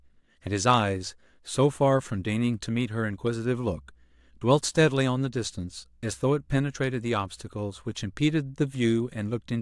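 Mains hum from 1.63 s to the end: a faint, steady 60 Hz drone beneath the speech, as power-line current couples into the signal.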